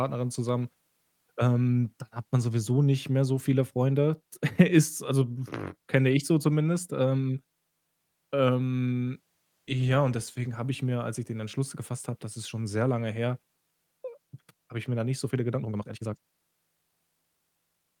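From 15.53 s to the end at 18 s there is a time-stretched section: the speech runs at twice its normal pace with pitch unchanged, likely from software squeezing it to fit by dropping short pieces. The abrupt change sounds rushed.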